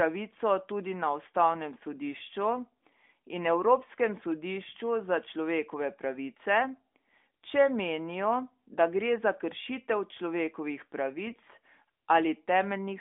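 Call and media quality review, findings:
Symptom: brief hoarse, scratchy, gargly burst from 11.26 to 11.39 s. Pitch and level roughly hold. Component: AMR narrowband decoder, on a line band-limited to about 250 Hz to 3.6 kHz. Fault: AMR bit errors. The burst length fits about six 20 ms frames. Weakly protected bits are flipped, at around a few percent, while the core checksum still passes. Pulse positions and fine pitch, gain and spectral values decode wrong, so the sound roughens.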